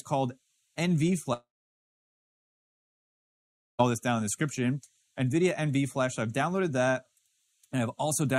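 At 1.33 s the sound breaks into a short fading buzz, then about 2.3 s of silence until it resumes at 3.81 s with roughly 2.5 s simply missing. This is a long network dropout, likely a stall where the receiver concealed briefly, then gave up.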